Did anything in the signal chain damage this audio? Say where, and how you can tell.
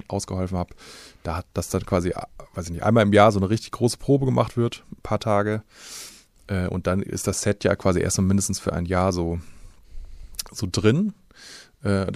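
Yes. At 1.49 to 1.54 s, between "ausgeholfen habe da hat" and "das dann quasi äh", the speech briefly turns into a garbled flutter. This is frames out of order, introduced at the network or decoder stage. Two adjacent blocks of about 26 ms each, which fits single codec frames, were decoded in swapped order. This differs from packet loss because no time goes missing and there is no gap or repeat. The sound is only reordered within that short stretch.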